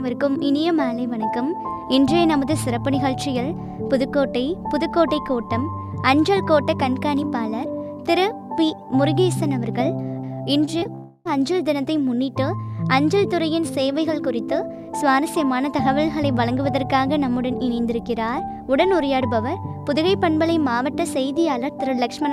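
At 10.65, 10.79 and 10.84 s there is short concealed packet loss. Each time about 20 ms of audio arrived too late. The decoder extended the preceding sound to cover the gap. Each sounds like a quick smear or wobble.

From 10.95 to 11.27 s the sound turns to a buzzy or hissy, fading continuation of itself for about 0.3 s, then real audio resumes. This points to a likely long network dropout, with the missing stretch filled in rather than left silent.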